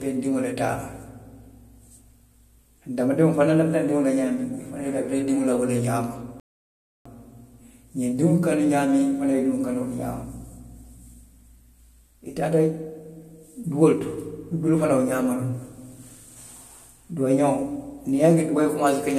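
At 6.40 s the player exhausted its buffer of downloaded audio and had to halt playback until more data arrived, a rebuffering stall. In the speech this lands as an abrupt drop to silence lasting about 0.66 s, ending at 7.06 s, after which the audio picks up at exactly the point where it broke off. No speech is skipped or repeated; the gap simply inserts dead time into the flow.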